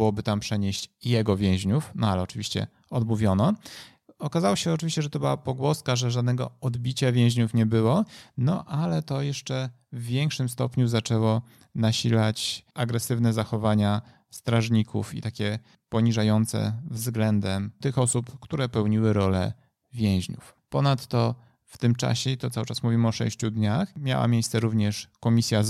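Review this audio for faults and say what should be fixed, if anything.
Nothing stood out on listening to this speech recording, so there is nothing here to fix.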